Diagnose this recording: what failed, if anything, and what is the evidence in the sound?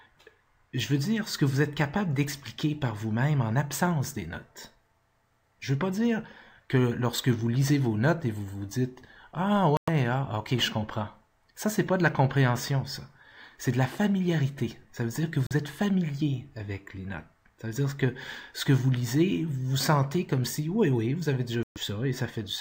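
Silent gaps at 9.77–9.89, 15.47–15.53 and 21.63–21.78 s show as sharp-edged vertical blanks; sound resumes skipped ahead, likely a Bluetooth dropout on the playback link.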